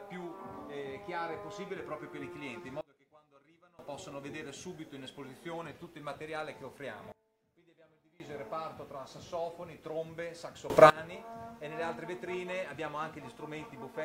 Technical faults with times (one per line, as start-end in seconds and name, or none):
2.81-3.79 sudden gain jump
7.12-8.20 sudden gain jump
10.70-10.90 sudden gain jump